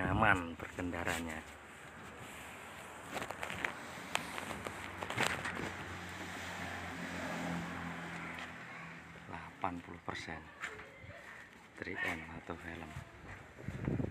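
A steady, rough buzz at about 43 Hz rides on the audio from 4.57 s to 5.37 s, with the sound running almost imperceptibly slower (0.999×) and keeping its normal pitch. This is a block size mismatch (padded): one stage hands over blocks slightly shorter than the next stage reads, and the missing tail of each block is filled with silence. The tiny gap repeating once per block makes the buzz, and its rate fits 1024-sample blocks.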